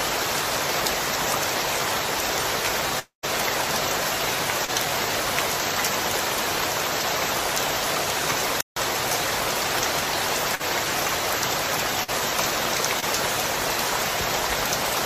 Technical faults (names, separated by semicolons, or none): long network dropout; short concealed packet loss; chunks out of order; playback stall; burst of packet loss